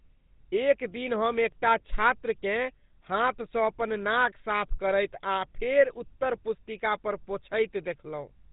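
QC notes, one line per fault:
Throughout, GSM full-rate codec: the speech has a plainly audible buzzy, gravelly roughness, with nothing above 3.8 kHz. The coarse pulse-driven excitation causes the grit, which is what separates it from a simple low-pass filter. This fits a 13 kbps encode.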